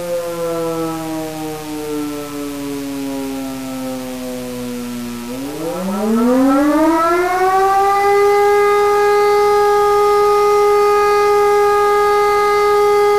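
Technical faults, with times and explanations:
Throughout, mains buzz: a steady, raspy 60 Hz buzz sits about 25 dB below the sound. Switching spikes twice per mains cycle spray harmonics up into the kilohertz range, which gives the edge that sets it apart from a smooth, low mains hum.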